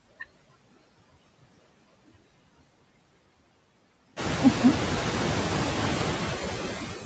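Noise suppressor artifacts run through the whole speech clip. The suppressor pulls down the bands it treats as steady noise by about 19 dB, so the background drops away between phrases and swells back underneath them. This is most audible from around 4 s, where the room noise rises by about 15 dB to sit only about 11 dB below the speech. On a spectrogram, the pauses show dark, blotchy gaps dotted with isolated specks. The waveform's floor pumps up and down with the speech. Everything stops cleanly at 8 kHz, which comes from the call's microphone processing.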